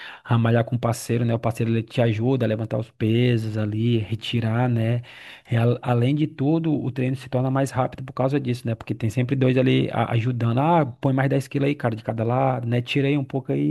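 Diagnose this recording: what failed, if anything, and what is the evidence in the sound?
Nothing failed: the speech signal is intact, with no dropouts, distortion, clicks or other breaks in continuity anywhere in the recording.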